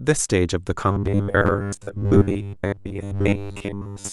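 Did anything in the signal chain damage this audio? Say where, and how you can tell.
Yes. From 0.91 s to the end there's robotic sound with a rigid 100 Hz buzz, likely a starved buffer looping 10 ms chunks in place of most incoming audio.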